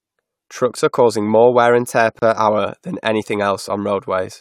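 At 2.19 s, just after "more wear and tear", the speech drops out for about 30 ms, ending at 2.22 s, then resumes with "hour than anything" exactly where it left off. The silence has smeared edges. This is a gap at a join of encoded pieces. The audio was encoded in separate sections of about 6 s and spliced without trimming, so the encoder's start-up delay and final-frame padding remain as a short hole.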